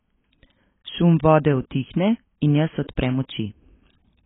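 A speech clip with AAC compression damage throughout. Nothing is heard above about 3.8 kHz, so the sound is dull and muffled. Sibilants turn fizzy and smeared. This heavy damage is likely from AAC-LC encoding at a very low bitrate, around 16 kbps.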